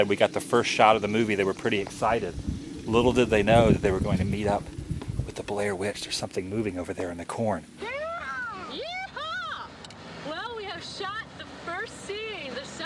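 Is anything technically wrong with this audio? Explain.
No, there are no technical faults.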